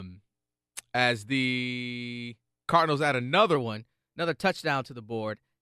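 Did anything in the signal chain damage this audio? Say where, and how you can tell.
Yes. From 3.55 s to the end at 5.62 s the speech runs about 1.09 times fast and sits roughly 1.5 semitones high, pointing to a wrong sample rate at playback, which fits 44.1 kHz material clocked out at 48 kHz without conversion. Because tempo and pitch rise together, this is a rate mismatch rather than a pitch-shifting effect.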